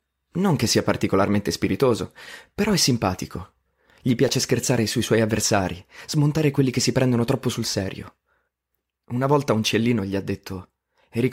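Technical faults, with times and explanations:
4.29 s, repeated buffer: late data made a 1.3 ms slice, fitting a 64-sample buffer, play five times. About 5 ms of audio is lost, heard as a click. The waveform shows one identical segment tiled with hard joins, and the spectrogram shows a thin vertical streak.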